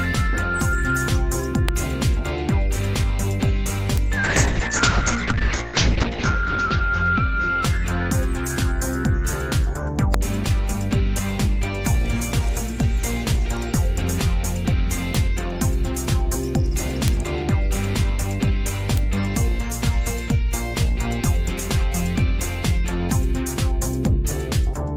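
Integer overflow cracks the audio at 1.69, 3.98, 10.14, 15.15, 17.08 and 18.98 s: loud peaks wrap to the opposite sign instead of limiting, giving violent snaps sharper than clipping. A call bitrate drop from 4.24 to 7.93 s makes the sound rough and muffled, with the top end falling from 20 kHz to 8 kHz for about 2.1 s. This points to the encoder being pushed from around 32 kbps down to about 7 kbps.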